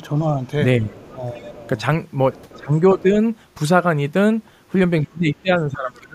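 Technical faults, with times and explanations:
0.0–0.14 s, 0.79–1.69 s, 2.56–3.16 s and 5.04 s to the end: speech suppressed in double talk. The talker's level sags each time, only slightly at the start, around 10 dB down in the middle two stretches, and close to 25 dB at the end. The likely cause is the echo canceller hearing both sides at once, failing to separate the talker from the loudspeaker echo, and ducking everything together.
1.0–1.1 s, 1.33–1.5 s and 2.33–2.6 s: other side's voice leaking through. Brief, faint scraps of a second voice sit under the talker, roughly 30 dB down in the first two and a bit stronger, about 25 dB down, in the third. They most likely come from the far end playing on the talker's loudspeaker and getting only partly removed from the microphone, so short fragments survive.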